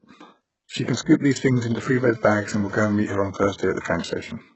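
Throughout the speech, the treble sounds synthetic and smeared, with nothing above 8 kHz. S sounds turn gritty and metallic. The codec damage is heavy. The likely cause is HE-AAC compression at a very low bitrate, around 8 kbps. It rebuilds the upper band from copied lower bands, so the harmonics there do not line up.

From 1.96 to 2.95 s, between "these things into three" and "meet her on", a GSM phone buzz appears. It is a hard, raspy 217 Hz tone with many harmonics, about 21 dB below the speech. A nearby phone's data bursts were rectified by the audio circuit, so the buzz comes and goes.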